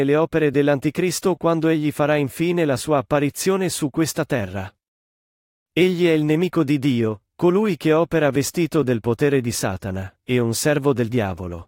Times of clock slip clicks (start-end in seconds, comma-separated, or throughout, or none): 0.10-11.51